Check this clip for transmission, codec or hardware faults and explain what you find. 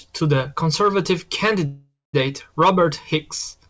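One transmission fault stands out: a call audio freeze from 1.66 to 2.15 s, heard through a G.722 call path that leaves nothing above 8 kHz. The speech halts and the last sound is drawn out as a buzz that fades, with the final 210 ms close to silence. Speech then resumes from where it stopped, 475 ms late, with nothing skipped. The likely cause is delayed packets leaving the jitter buffer empty while the receiver filled the wait. A spectrogram shows smeared horizontal streaks fading out, and the waveform shows a decaying block before a flat stretch.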